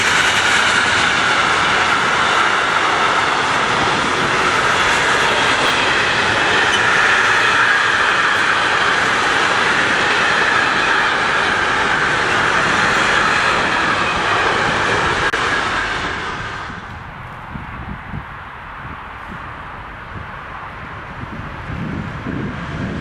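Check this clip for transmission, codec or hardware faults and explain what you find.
Two brief faults of the same kind turn up, at 5.66 to 5.70 s and again at 12.94 to 12.98 s: chunks out of order. Each time a 20 ms block arrived one slot late and was played after its successor, so the two blocks are swapped and nothing is missing. That gives a 40 ms jumbled stutter with three hard joins. On a waveform the envelope jumps discontinuously at each seam, and a spectrogram shows thin vertical broadband lines there.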